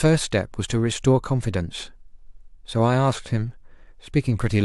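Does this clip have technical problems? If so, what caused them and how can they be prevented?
No, nothing in this speech clip points to a technical fault, so there is no cause to trace and nothing to prevent.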